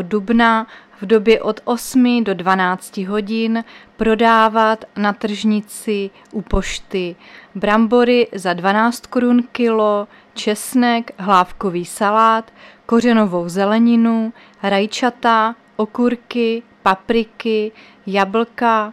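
No technical faults can be heard anywhere in the audio.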